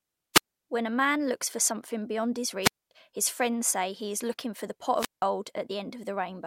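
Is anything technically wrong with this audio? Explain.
Yes. The speech has three wireless microphone squelch dropouts: 0.34 to 0.44 s (mute 61 ms), 2.62 to 2.91 s after "for something beyond his" and before "his friends say he" (mute 237 ms), and 4.96 to 5.24 s after "looking for the pot" (mute 172 ms). Each time, the radio signal fades and hiss swells briefly. The receiver's squelch then mutes the output into near silence before the voice returns.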